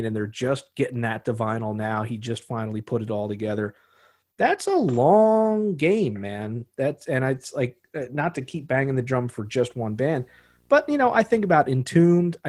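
From 9.45 s to 11.78 s, a video or display buzz gets into the speech: a screen or video cable is coupling interference into the audio path, so the picture's 60 Hz field rate rides along as an electrical buzz. It sits well below the speech, at roughly 40 dB down, heard as a low, steady rasp at 60 Hz with a thin hash of harsher noise above it. It stops when the coupling ends.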